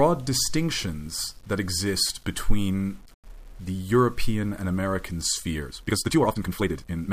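From the first moment to the last, the speech carries a grainy, gritty texture that follows the signal, sitting roughly 35 dB below it. Quiet passages and the tails of syllables turn rough instead of fading cleanly. The likely cause is low bit depth without dither: the audio was rounded to 8 bits with no added noise, so the rounding error moves with the waveform and is heard as distortion rather than as a steady, neutral hiss.

At 5.63 s the pace abruptly jumps, and from there to the end the speech runs at twice its earlier speed, sounding rushed while its pitch stays where it was. This points to a time-stretched section, which is likely what happened here. Software squeezed this final stretch to half its length and preserved pitch by dropping short pieces of the waveform, rather than simply playing it faster, which would have raised the pitch.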